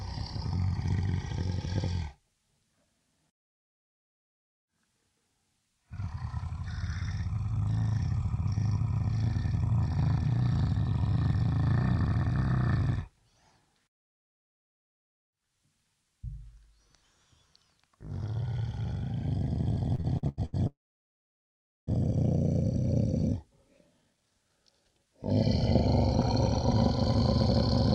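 From 19.95 to 20.55 s the sound shows repeated stalls (stutter). Packets arrived late, so the jitter buffer ran dry five times, the longest gap about 87 ms. The receiver stretched the last sound across 276 ms, nearly half the span, so the audio drags and judders without losing content.

A call audio freeze follows from 20.67 to 21.89 s. The audio halts for about 1.2 s, most of it (1.12 s) silent after a brief fading continuation, then resumes where it stopped. The likely cause is packets held up in transit, emptying the jitter buffer.

From 23.98 to 25.07 s a jitter buffer speed-up is audible. With more audio queued than the buffer aims for, the receiver trimmed many short pitch-period slices, roughly a third of a second in total. The sound plays at 128% speed with unchanged pitch and seems hurried.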